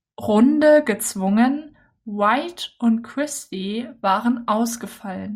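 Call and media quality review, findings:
No audible faults found.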